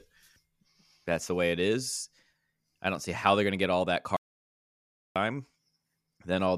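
The input feed was likely lost from 4.17 to 5.16 s, with the recorder writing silence for about 0.99 s. This audio dropout to silence cuts the speech off right after "to get all that", leaving a dead, roomless gap before sound abruptly returns.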